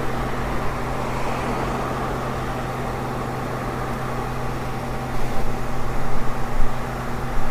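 Nothing in this recording of sounds points to a technical defect in the signal chain; the audio carries no audible disruption, distortion or dropout anywhere along its course.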